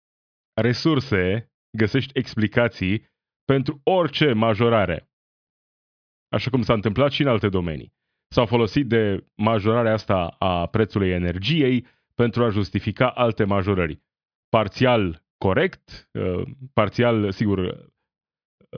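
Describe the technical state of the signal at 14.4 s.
At 14.4 s the speech signal is intact, with no technical fault present at that moment.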